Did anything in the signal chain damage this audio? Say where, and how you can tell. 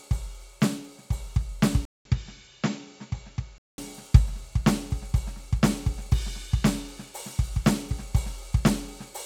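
Yes. At 1.85 s the music drops out for 200 ms, then returns duller and a few dB quieter, with nothing above 7.6 kHz and a new noise floor well below the music, until 3.78 s. This points to the input likely switching to a poorer device at the driver stage.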